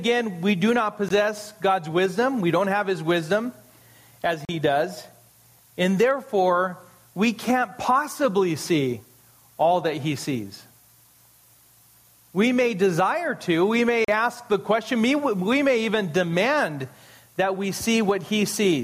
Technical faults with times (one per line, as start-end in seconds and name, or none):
0.00-18.83 gain pumping
1.09-1.11 Bluetooth dropout
4.45-4.49 Bluetooth dropout
14.05-14.08 Bluetooth dropout